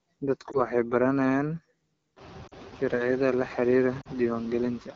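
A speech recording passed through a noise suppressor that cuts what it judges to be steady noise by about 15 dB frame by frame, so the background sinks in pauses and swells back under the talker. The room noise rises by about 20 dB around 2 s. The AMR wideband (HD Voice) codec is running at a low rate, which fits its 8.85 kbit/s mode, and its simplified vocal tract modelling leaves the speech plainly rough and raspy throughout. Lost AMR speech frames, where the decoder stretches the last good frame at falling gain, cause a brief dip or warble at 0.51 to 0.57 s, which fits one missing 20 ms frame. Longer dropouts that sink to near silence at 2.47 to 2.54 s and 4.01 to 4.08 s fit two missing frames each, and the voice returns briefly weak afterwards.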